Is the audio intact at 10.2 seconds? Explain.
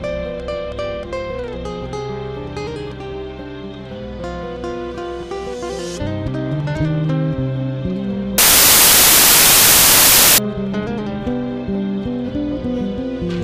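No. Loud, harsh broadband noise covers 8.38 to 10.38 s, from samples built from the wrong bytes: misaligned byte assembly turns each value's fast-changing low bits into its dominant part.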